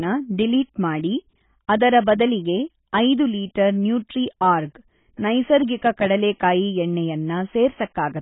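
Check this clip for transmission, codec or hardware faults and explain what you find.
One fault runs through the whole clip: AAC compression. The speech sounds dull, smeared and warbly, likely from heavy AAC-LC coding near 16 kbps that removes the band above 3.8 kHz. A spectrogram shows a flat ceiling at 3.8 kHz.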